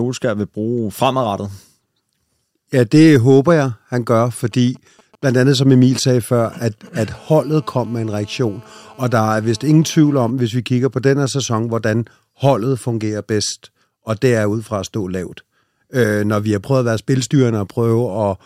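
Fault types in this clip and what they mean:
GSM signalling bursts: from 4.52 to 7.04 s, a nearby 2G phone exchanging short control transmissions, whose radio pulses the audio circuitry rectifies into a galloping dit-dit-dit of brief 217 Hz buzzes, sitting roughly 30 dB below the speech.
GSM phone buzz: from 7.07 to 10.31 s, a nearby 2G phone now in a call, transmitting continuously at 217 bursts per second; rectified pulses give a steady, raspy, harmonic-rich 217 Hz buzz, unrelated to the speech, at about 29 dB below it.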